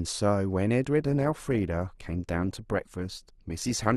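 At 0.98 s the speech abruptly takes on more codec artefacts, with no gap in the sound, and stays that way to the end. This is an adaptive stream at a lower bitrate, consistent with a drop from roughly 64 to 24 kbit/s Opus.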